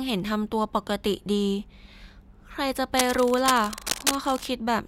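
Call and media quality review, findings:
Cable scratch noise, 2.97–4.47 s: dense, uneven scratching and rustling laid over the speech, nearly as loud as the speech itself. Likely a worn cable or connector being moved, with contact resistance fluctuating rapidly. Irregular bursts distinguish it from steady hiss or evenly spaced clicks.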